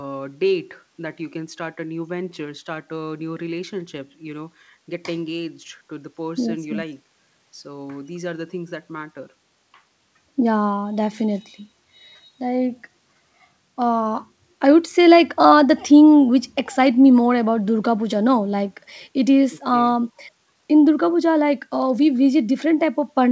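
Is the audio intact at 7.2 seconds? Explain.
Yes, at 7.2 seconds the speech comes through intact, with no dropout, glitch or distortion at that moment, only the band-limited sound of the call path, which carries nothing above about 8 kHz.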